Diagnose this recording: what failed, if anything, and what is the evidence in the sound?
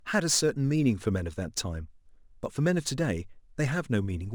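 Sample clock jitter at the converter, all the way through: a gritty hiss rides on loud, bright speech and vanishes in pauses, because the sampling clock wobbles by a few microseconds.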